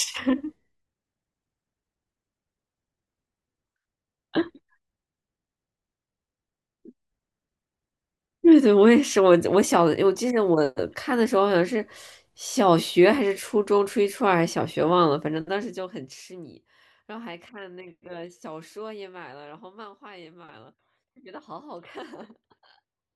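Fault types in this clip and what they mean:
Zipper noise: The speech level is pulled down in discrete steps rather than a continuous ramp, so each jump in gain leaves a small click in the waveform. From 15.14 s to 16.67 s the level falls by roughly 20 dB at around 30 steps a second, and the clicks merge into a ticking, zipping texture over the speech for as long as the fade lasts.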